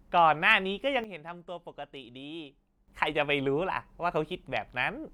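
At 1.04 s the speech drops abruptly by about 12 dB, voice and background noise falling together, and stays down until 2.88 s, where it snaps back up. This sudden gain jump likely comes from a digital gain setting applied instantly, without any ramp.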